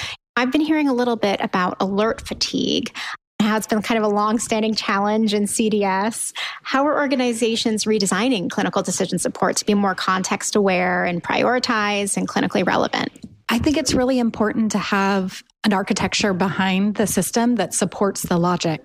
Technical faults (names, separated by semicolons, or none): none